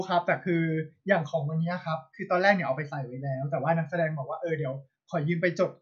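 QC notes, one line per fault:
No faults heard in this recording.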